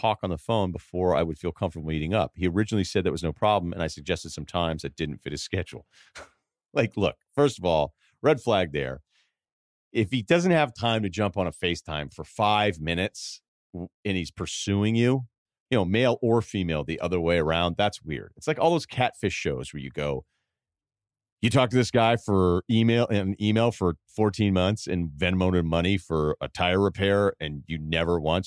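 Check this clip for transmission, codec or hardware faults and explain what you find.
No faults found in this clip.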